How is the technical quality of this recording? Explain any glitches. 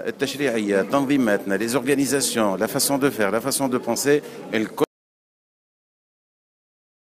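The recording has one clear fault, an audio dropout to silence. At 4.84 s the sound cuts off mid-flow and never comes back. The last 2.2 s of the clip are silent. No room tone or background hiss remains in that gap. The cause is likely a lost input, through a disconnected device, a failed link or a stray mute, while the recorder kept writing silence. Whatever sounded after 4.84 s is gone.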